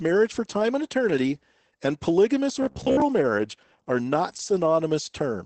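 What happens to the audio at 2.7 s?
From 2.63 to 3.02 s, between "and eternity and polygamous" and "marriage are not", the speech turns into robotic sound from repeated short buffers: a rigid, metallic buzz at 66.8 Hz. The likely cause is audio arriving too seldom, so the player loops the last fragment of about 15 ms while the real audio is skipped. Roughly 70 percent of that span is repeated material.

The same stretch also carries the Opus voice compression heard throughout the clip. It is SILK coding at 12 kbps with wideband bandwidth, so nothing is present above 8.6 kHz and the coding damage is plainly audible.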